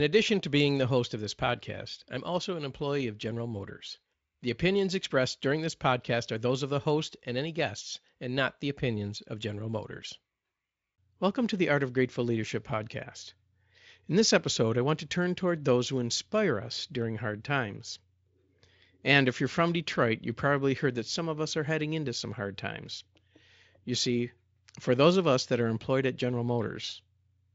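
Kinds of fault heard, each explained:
No faults can be heard.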